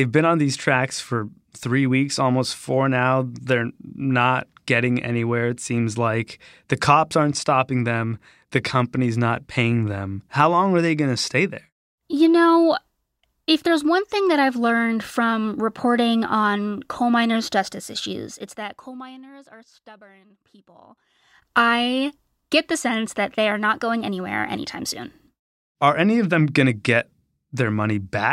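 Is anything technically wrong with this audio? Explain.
Yes. From 18.1 to 19.3 s, after "on coal miners' justice" and before "are stubborn people I", a ticking zipper noise rides the speech as it drops by roughly 25 dB, applied in 1 dB steps about twenty times a second without smoothing.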